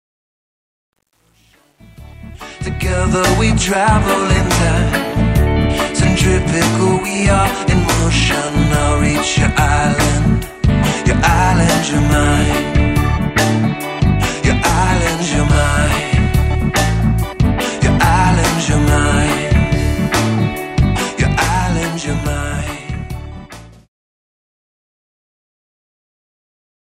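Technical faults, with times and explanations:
0.00–3.10 s, truncation distortion on a fade: the fade-in sounds gritty, worst until 2.39 s, fitting undithered 9-bit steps; waveform shows staircases, spectrogram broadband grit.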